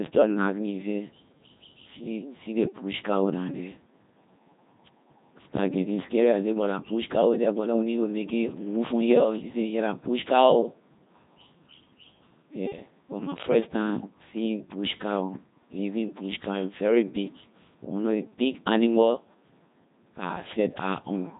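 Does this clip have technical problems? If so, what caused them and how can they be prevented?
Yes. Throughout the speech the Codec 2 vocoder damage is heavy: the voice comes out robotic and buzzy, which fits a rate around 2.4 kbit/s. Only pitch, voicing, energy and spectral envelope survive, so the decoder rebuilds speech from sine waves. This is unlike a waveform codec's watery smearing. To prevent it, carry the speech over a higher-bitrate waveform codec instead of this digital-radio vocoder.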